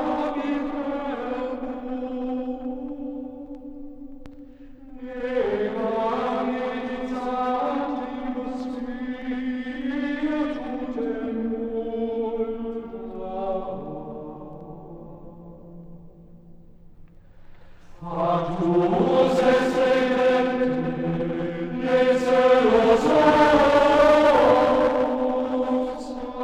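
No technical faults can be heard anywhere in this audio. Nothing in the sound calls for a repair.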